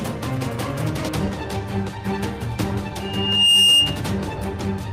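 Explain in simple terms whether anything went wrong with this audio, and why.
A high, piercing whistle swells up from about 3.00 s, grows over roughly half a second until it is much louder than the rest of the sound, and stops at 4.03 s. This is loudspeaker feedback squeal: the microphone picked up its own loudspeaker, and a tone around 2.8 kHz kept amplifying itself around the loop.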